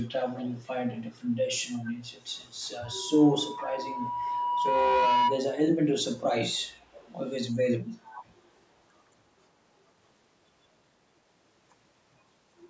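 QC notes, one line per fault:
0.00–1.26 s, 1.66–2.46 s, 3.43–3.66 s, 4.05–4.59 s, 6.54–7.31 s and 8.03–8.25 s, echo leak: a faint copy of the speech trails it by 445 ms, mostly around 20 dB down but ranging from about 15 to 35 dB below. This is likely a loudspeaker at the far end whose echo canceller let part of the playback back into the microphone.
2.84–5.47 s, loudspeaker feedback squeal: a steady 973 Hz tone rises over roughly two seconds until it sits about 5 dB above the speech, then stops. A microphone was hearing its own loudspeaker, and at that frequency the loop gain went above one, so the tone kept feeding itself.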